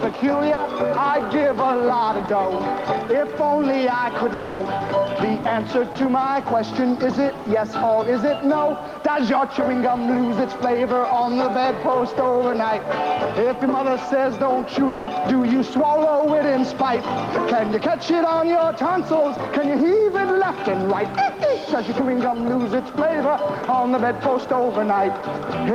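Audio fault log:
0.53–0.59 s, short concealed packet loss: About 40 ms of audio never reached the decoder in time. The receiver filled the hole by carrying on the last sound, then blended back into the real signal. That patch is heard as a brief smear or wobble. Anything short inside those 40 ms is gone.
4.33–4.61 s and 14.87–15.09 s, long network dropout: Each gap is filled with a continuation of the preceding sound that fades as it runs, 260 ms in the first and 200 ms in the second. Neither gap falls to silence. The audio then resumes further on, without the missing part. The likely cause is a stretch where no packets arrived and the receiver stretched its last sound to cover them.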